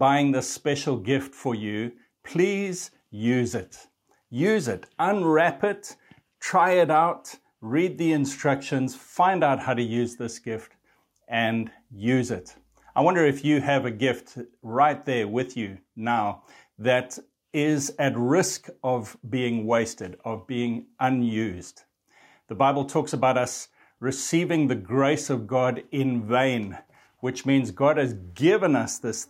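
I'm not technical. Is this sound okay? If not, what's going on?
Yes, nothing in this recording points to a technical fault, so there is nothing here to fix.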